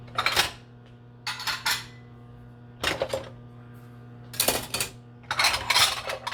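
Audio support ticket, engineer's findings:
Listened back and found nothing wrong anywhere in the recording, so there's nothing to chase here.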